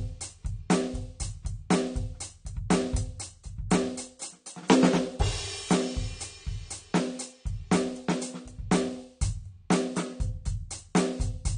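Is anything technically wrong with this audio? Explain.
Yes. Throughout the music there is plainly audible damage, likely from AAC compression. Nothing sounds above 9.7 kHz, so the top end is dull and sustained tones smear and warble. AAC-LC throws away spectral detail the hearing model treats as least noticeable, and damage this strong fits a low bitrate around 32 kbps. A spectrogram shows a flat ceiling at 9.7 kHz with empty space above it.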